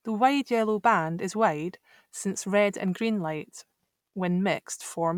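No technical faults can be heard anywhere in the audio.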